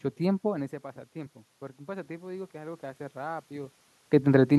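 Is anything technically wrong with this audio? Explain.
Yes. From 0.41 to 4.54 s there is automatic gain rising: the speech level drops by about 16 dB as the talker moves away, and the gain control responds by slowly raising gain by about 6 dB, so voice and room noise swell together.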